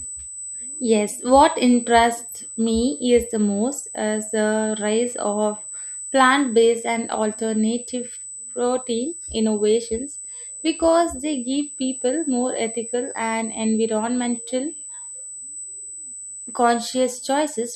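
Speech runs with a USB whine throughout: a fixed-pitch tone at 8 kHz, sitting roughly 15 dB below the speech. Unlike mains hum, which lives at 50 or 60 Hz, this pitch matches the bus's 125-microsecond microframe rate leaking through power or ground.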